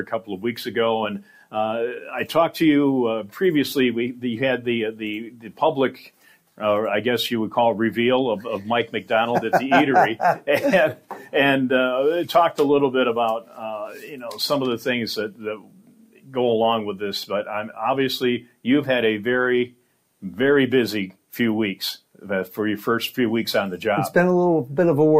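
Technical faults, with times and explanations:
No technical faults can be heard in this audio. Nothing in it calls for a time or an explanation.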